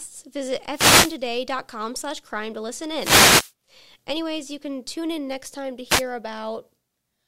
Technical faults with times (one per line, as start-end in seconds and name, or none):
0.71-1.17 wireless microphone noise hit
2.95-3.52 wireless microphone noise hit
5.89-6.03 wireless microphone noise hit